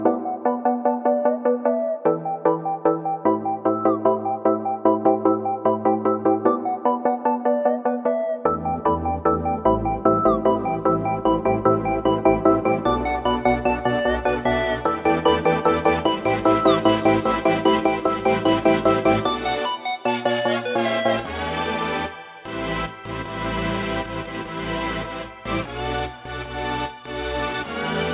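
No technical faults occur in this audio.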